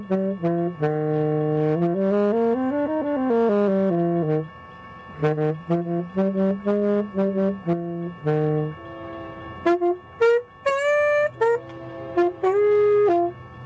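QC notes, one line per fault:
No faults found; the sound arrives over a G.722 call path, so nothing reaches above 8 kHz.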